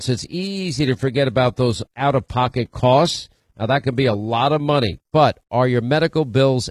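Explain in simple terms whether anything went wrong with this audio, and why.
Yes, something went wrong at the start. From 0 to about 5.2 s the speech sounds dull and fizzy, with the crisp top end missing or faked and more swirly compression artefacts. That is an adaptive stream starting at a low bitrate: the player began on a cheap version to start fast, then switched to a better one. What sets it apart from a dropout or a bad connection is that the sound never stops; at 5.21 s it simply becomes clearer, with no gap.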